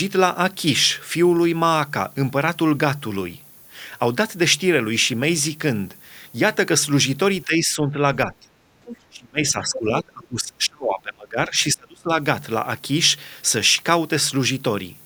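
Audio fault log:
Throughout: low bit depth with noise shaping. A steady, thin hiss sits under the speech at roughly 25 dB below it and climbs sharply toward the top of the band. The quantisation error from a very short word length, which fits something like 9 bits, has been pushed upward in frequency by the noise-shaping filter. The low and middle ranges stay fairly clean, but the treble carries a constant bright grain.
7.45–8.08 s, 8.26–8.49 s, 9.09–11.57 s, 11.74–12.17 s: speech suppressed in double talk. The talker's level sags in four stretches. The dips deepen as the clip goes on, from about 10 dB in the first to around 30 dB in the last. The longest, from 9.09 to 11.57 s, pulls the voice well down for roughly two seconds. This is likely an echo canceller that could not separate near-end speech from loudspeaker echo while both sides spoke, so it attenuated everything.
8.84–8.97 s: other side's voice leaking through. 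A brief scrap of a second voice, about 15 dB below the main speech, comes through for roughly 0.13 s. It falls between the suppressed stretches, when the far side was active. The likely cause is residual loudspeaker echo that the canceller failed to remove from the microphone signal, so a short fragment of the far talker reaches the output.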